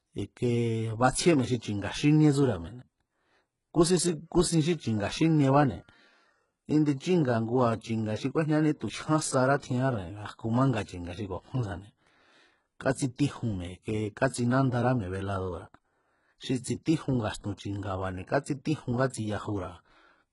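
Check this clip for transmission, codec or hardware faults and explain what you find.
There's one codec fault, present for the whole speech clip: it sounds like HE-AAC compression at a very low bitrate, likely around 12 kbps. Nothing reaches above 11.1 kHz, and the treble is rebuilt from copied lower bands, so harmonics don't line up. S sounds come out gritty and metallic, and the damage is heavy.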